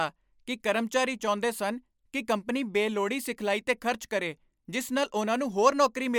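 A speech recording, and nothing is technically wrong with it.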